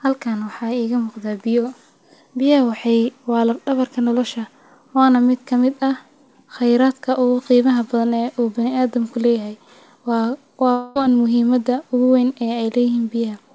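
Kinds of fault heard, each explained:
Long network dropout: from 10.72 to 10.97 s the speech is replaced by its own last sound, stretched into a fading buzz that fills almost the whole quarter second without reaching silence. It resumes at "muhiimada ogu wayn" with that stretch simply missing. The likely cause is a run of lost packets hidden by the receiver. Unlike a brief packet loss, the fill lasts long enough to audibly decay within the 8 kHz G.722 band.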